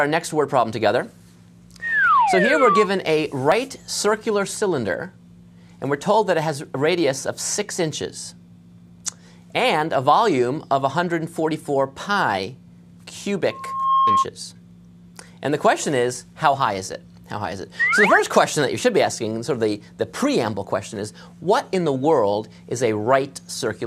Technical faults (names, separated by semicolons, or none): loudspeaker feedback squeal